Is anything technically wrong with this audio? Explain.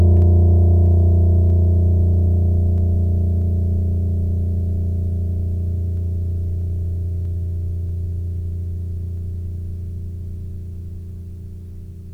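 Yes. From 0.22 to 11.73 s the music carries a regular click roughly every 0.64 s, about twenty in all. These are likely clock drift buffer slips, where two clocks about 300 ppm apart force a few samples to be dropped or repeated. Each shows as a thin vertical spectrogram line and a tiny waveform step.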